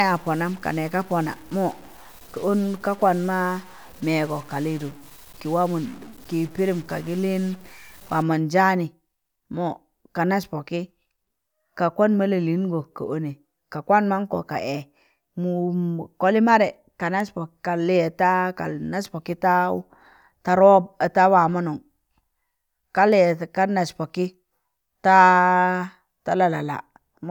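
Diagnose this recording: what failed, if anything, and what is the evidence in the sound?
Stuck bit, 0 to 8.2 s: one bit, likely held at the converter, shifts about half the samples by about -40 dBFS: buzz, noisy pauses.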